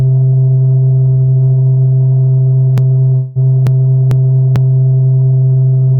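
A music clip with two overlapping transport faults. From 2.78 s to 4.56 s there is a broken-record loop: a 445 ms fragment plays four times back to back with identical content, and the music that should have filled that stretch never arrives. This is likely a playback or streaming stall in which the last buffered fragment kept being re-sent until fresh data resumed, so the loop ends with an abrupt jump forward. Inside the loop, from 3.15 s to 3.38 s, a long network dropout interrupts the repeating fragment. About 200 ms of audio is missing, and the receiver fills that gap by extending the last sound as a fading buzz or hiss rather than leaving true silence. This is likely concealment covering a lost run of packets. The concealed segment breaks the exact repetition of the loop for that moment before the repeated fragment continues.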